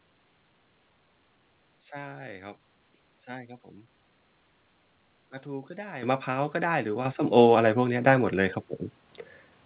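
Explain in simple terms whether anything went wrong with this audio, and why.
The recording has a microphone volume stepped up fault, happening three times: at 6.03, 7.05 and 9.09 seconds. At each point the call software decided the microphone was too quiet and turned its input level up in a single jump rather than gradually. The speech and the background noise get louder together, which is the telltale sign. The first jump is large, the second moderate, the last slight. The sound is telephone-band throughout, with nothing above 4 kHz.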